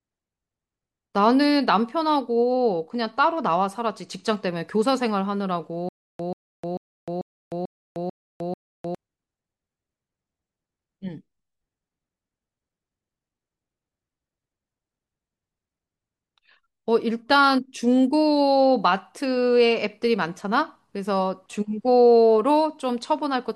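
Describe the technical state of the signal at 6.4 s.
At 6.4 s the speech is in a stutter with silent gaps, from 5.89 to 8.95 s. A 136 ms fragment repeats seven times. Each repeat is followed by 306 ms of digital silence, a 442 ms cycle. A stalled stream likely replayed its last fragment, and the audio due there is lost.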